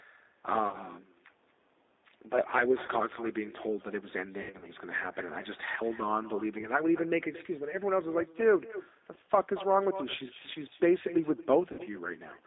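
From the start, an echo with no canceller shadows everything about a fifth of a second later at about 16 dB down, showing as a faint delayed copy of each syllable on a spectrogram. Throughout, G.729 codec damage is plainly audible: rough, synthetic speech confined to roughly 250 Hz to 3.7 kHz, with a hard spectral ceiling, which fits an 8 kbit/s G.729 stream. VoIP packet loss concealed by the speech codec appears at 0.69–0.79 s, 2.86–2.89 s, 4.42–4.67 s, 6.61–6.69 s, 9.14–9.18 s and 11.72–11.81 s. Each is a fading smear, a buzzy tone or coloured noise, where the waveform loses its detail and spectrogram harmonics flatten into smooth stripes. The worst is near 4.4 s, where 140 ms is lost across 200 ms, with a longest run of 80 ms.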